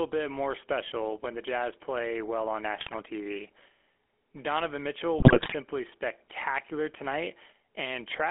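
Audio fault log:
throughout GSM full-rate codec: buzzy, gravelly speech confined to a 300 Hz to 3.4 kHz band, fitting a 13 kbps GSM coder; spectrogram shows empty space above 3.4 kHz.
2.76–2.95 s GSM bit errors: just after "play well on", corrupted filter, pitch or gain values turn speech into squawks and gargling; spectrogram shows smeared, distorted bands.
5.18–5.55 s GSM bit errors: a longer corrupted stretch, around 18 frames of bad parameters producing pops and gargling; waveform shows erratic level jumps, spectrogram warped formants.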